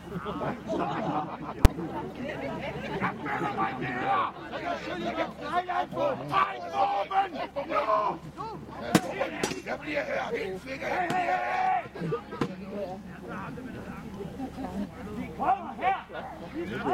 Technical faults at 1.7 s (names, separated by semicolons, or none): invalid numbers at full scale